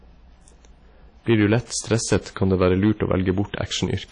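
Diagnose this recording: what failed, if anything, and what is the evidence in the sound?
A level stage was overdriven by about 6 dB, so hard clipping flattens speech peaks across the clip, adding crackle and high harmonics to a small share of samples.

The codec stage likely used WMA compression, at what sounds like a low bitrate around 32 kbps. Nothing survives above 10.1 kHz, and the ringing, washy quantisation noise is plainly audible throughout.

Pre-echo appears from 1.66 to 1.70 s. The transform block spread its noise about 42 ms ahead of a sharp attack, so a hiss precedes it and the onset sounds smeared.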